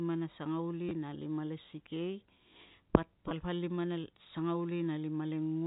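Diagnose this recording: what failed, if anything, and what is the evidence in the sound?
Packet loss with last packet repeated, at 0.89 to 0.91 s and again at 3.29 to 3.31 s, is a network-stage fault in this speech. Each 20 ms gap is filled by replaying the most recent packet, which fits two lost 10 ms packets. The brief repeat gives a short robotic stutter over the narrowband G.711 telephone sound.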